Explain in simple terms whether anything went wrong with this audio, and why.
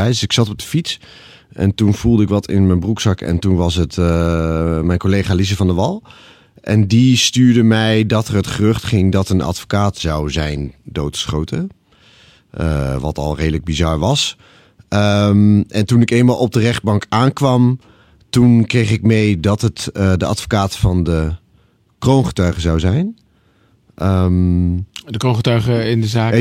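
Nothing went wrong here.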